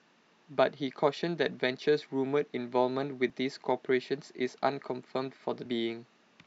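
At 3.30 s and 5.64 s, damaged data in the compressed stream makes the decoder misread frames and lose sync, producing brief glitches.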